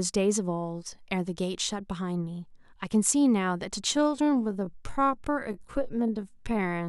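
From 3.89 s to the end of the speech, the pace abruptly drops to about 0.63 times normal speed while the pitch stays unchanged. This is a time-stretched section, likely produced by software lengthening the audio by repeating short slices, which makes it drag. Because the pitch holds steady, it differs from a simple playback-speed slowdown, where everything would also drop in pitch and sound deeper.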